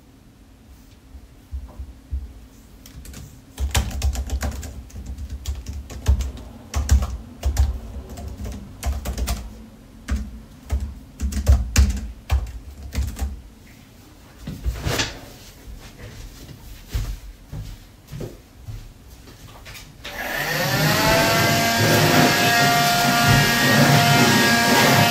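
Around 18.73 to 18.75 s there's a corrupt frame decoded: a brief, quiet glitch about 20 ms long, which fits a single damaged frame. Some bits in that compressed frame got flipped, and the decoder went ahead and played it, so misread gains or codes dropped energy into the wrong frequencies for just that moment. It's low, peaking somewhere around -40 dBFS, so it comes across as a faint artifact sitting on top of the sounds.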